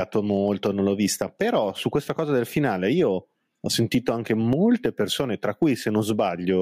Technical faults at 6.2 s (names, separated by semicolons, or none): gain pumping